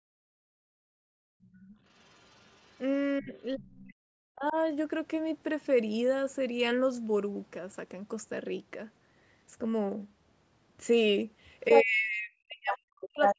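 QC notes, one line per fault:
0.00–1.78 s, background gated by the echo canceller: the room sound ducks hard right from the start, dropping by about 40 dB at its deepest, with around a second and a half of the span sounding thinned or gone. That's the canceller clamping the mic while the loudspeaker was playing. The background pumps back in whenever it releases, so you get that choppy, breathing ambience instead of a steady floor.
1.43–2.80 s, 11.69–11.83 s and 12.71–13.35 s, other side's voice leaking through: a second voice sneaks into the mic signal, most likely loudspeaker playback the echo canceller didn't fully strip out. The first stretch is faint, roughly 35 dB under the talker, so it sits back as a ghostly scrap. The two late bursts are much worse, roughly as loud as the talker, and come across as clearly audible fragments.
3.20–4.56 s and 11.68 s to the end, speech suppressed in double talk: the talker's own voice sinks, by around 40 dB at worst, over roughly a second in the first window and a second and a half in the second. 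Both ends are likely talking at once here, and the canceller can't tell its talker from the echo, so it pulls everything down together. The voice dips instead of staying level.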